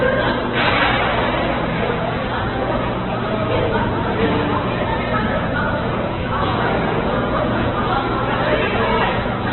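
Heavy Opus compression runs throughout the sound: nothing survives above about 4.1 kHz, and tones come out rough, grainy and noisy rather than swirling. That likely comes from Opus in its CELT music mode at a very low rate, which fits roughly 8 kbps.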